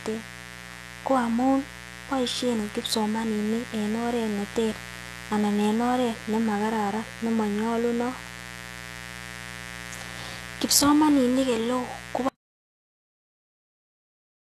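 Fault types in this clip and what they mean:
Mains buzz, throughout: a steady, raspy buzz sits under the speech from start to finish, roughly 15 dB below it. Its fundamental is 60 Hz, so a switching load or a missing shield let sharp spikes into the signal path twice per mains cycle. Those spikes create a ladder of 60 Hz harmonics that climbs well into the kilohertz range, which is why the buzz sounds gritty rather than like a pure low hum.
HE-AAC compression, throughout: the speech carries plainly audible codec damage, and nothing survives above 12.3 kHz. The likely cause is HE-AAC at a low rate, which fits around 16 kbps. Only the lower band is coded directly. The treble is rebuilt by copying lower bands upward under a coarse envelope, so harmonics fail to line up across the crossover and sibilants turn gritty, metallic or lispy.
Audio dropout to silence, 12.29 s to the end: the speech cuts off mid-flow at 12.29 s. 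Dead silence follows for the remaining 2.2 s or so, with no room tone and even the mains buzz gone. That points to the input itself being lost, likely through a disconnected device, a failed link or a stray mute, while the recorder kept writing silence. Whatever was said in that stretch is gone.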